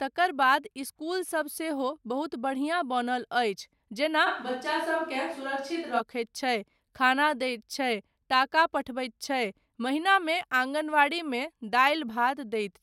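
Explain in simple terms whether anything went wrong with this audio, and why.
From 4.28 to 5.99 s the speech abruptly turns roomy and hollow, with less bass at similar loudness, likely a switch to a distant microphone.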